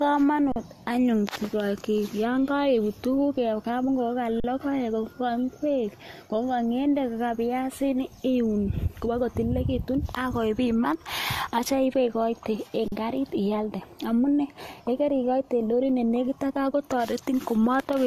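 From the start, the speech sounds swirly, smeared and hollow, with nothing above 14 kHz. Consonant attacks blur. This is likely generation loss from repeated lossy re-encoding, perhaps three passes. Each pass adds fresh quantisation noise on a shifted frame grid. The sound fits AAC-LC near 64 kbit/s.

At 0.52, 4.40 and 12.88 s, the last just after "ibe igoite en", the sound stops flat for 40 ms. Each is an underrun with held sample. The output buffer ran dry, and the converter held its last value. Playback resumes where it stopped, so there is barely a click.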